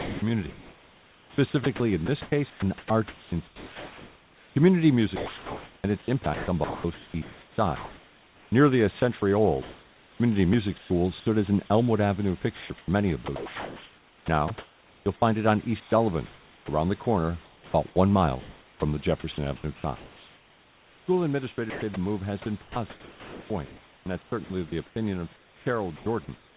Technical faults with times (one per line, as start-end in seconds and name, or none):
0.00-11.26 sound chopped by the voice detector
12.56-17.96 sound chopped by the voice detector
18.80-26.57 sound chopped by the voice detector